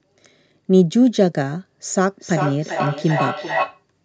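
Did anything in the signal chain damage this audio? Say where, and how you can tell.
Yes. The damage sits in call processing: a feedback echo between two devices runs from 2.09 s to 3.84 s. Over that stretch the speech comes back at a fixed spacing of roughly 0.4 s, with the returning copy reaching about 6 dB below the direct speech. Two devices in the same room share the call. One plays out what the other's microphone sent, and that microphone picks it up again. Each device's echo canceller only removes its own playback, so this loop goes uncancelled.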